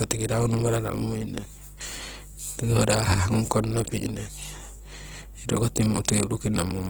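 From the start of the speech to its end, a mains hum runs underneath everything as a steady low tone at 50 Hz, sitting roughly 20 dB below the speech. The mechanism is power-line energy leaking into the signal path, as through a ground loop or a nearby transformer. The hum does not vary with the speech, so it stays exposed in every pause and thickens the low end under voiced sounds.

Across the same span, the speech carries plainly audible coding damage: the voice sounds grainy and rough rather than swirly, with band energy preserved but its fine detail replaced by noise-like texture. This is likely Opus compression in its music (CELT) mode, at a rate that fits about 16 kbps. The bandwidth still reaches about 20.2 kHz, so the damage comes from coarse filling of bands, not from muffling.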